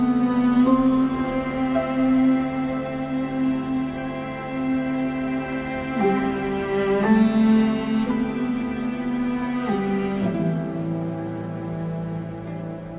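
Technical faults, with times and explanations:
Nothing here counts as a fault, since the audio has simply come through a normal call path whose narrowband coding leaves nothing above 4 kHz, the way telephone-grade audio at 64 kbps is meant to sound.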